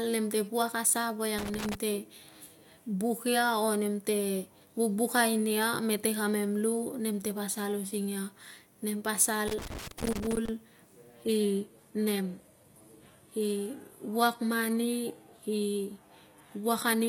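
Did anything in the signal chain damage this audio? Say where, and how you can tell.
Yes. Loose connector crackle at 1.38 to 1.75 s and 9.48 to 10.48 s, in the analogue wiring: irregular scratchy bursts as a worn contact makes and breaks, chopping the signal.

Adaptive stream at a lower bitrate, from 11.23 s to the end, at the network stage: the treble abruptly cuts off above 14.9 kHz, and codec artefacts rise with no gap. This fits a switch from AAC-LC at 96 kbit/s to HE-AAC at 20 kbit/s.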